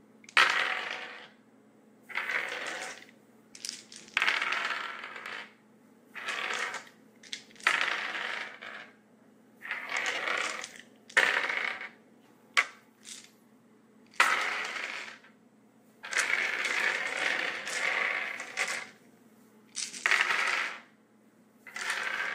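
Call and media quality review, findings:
Lost LE Audio frames, 10.15 to 10.18 s. Brief noisy smear replaces the sound for about 22.5 ms. That fits three 7.5 ms frames dropped on the Bluetooth LE link. The LC3 decoder concealed the gap by repeating the last spectrum with scrambled signs.

Lost LE Audio frames, 14.67 to 14.69 s. Same smear, shorter, about 15 ms. That points to two frames lost. Same concealment in the LC3 decoder. Light lossy compression throughout.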